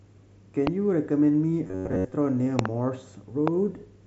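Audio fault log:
0.67 to 0.69 s, 2.59 to 2.68 s and 3.48 to 3.50 s, loud pop: three sharp bursts land on top of the speech, which carries on underneath. The first and last are single pops, and the middle one is a quick double. They peak about 15 dB above the signal, with the last one nearer 20 dB. These are likely sudden voltage steps, from something like a connector, a switch or a driver glitch, that the downstream circuitry shapes into a pop.
1.67 to 2.12 s, robotic sound from repeated short buffers: the speech turns into a stiff, metallic buzz pitched at 93.8 Hz that only loosely follows the speech. Most of this stretch is recycled audio rather than new material. The likely cause is audio arriving too late, with the playback filling the gap by looping its last chunk of roughly 10.7 ms, which fits that buzz frequency. The speech passes through the mSBC headset link, with its light graininess and 8 kHz ceiling.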